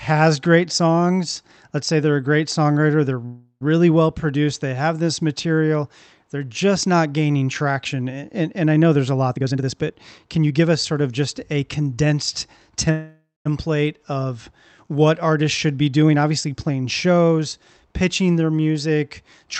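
A speech recording carried over an Opus call path, with the top end cut off above 8 kHz, has two call audio freezes. After "a great songwriter they're", from 3.25 to 3.63 s, the sound stalls into a fading buzz and about 60 ms of silence, then resumes at "well produced they have". After "of just a condensed", from 12.91 to 13.47 s, it stalls with about 190 ms of silence before "of what artists should". The likely cause is late packets emptying the jitter buffer. Nothing is lost, but each pause adds delay. There are also two jitter buffer speed-ups, where the voice turns hurried at unchanged pitch. From 9.35 to 10.67 s it runs at 126% speed. From 16.08 to 17.62 s, between "what artists should be" and "pitching their", it runs at 112%. The receiver was trimming pitch-period slices to shed excess buffered delay, roughly 0.4 s and 0.2 s respectively.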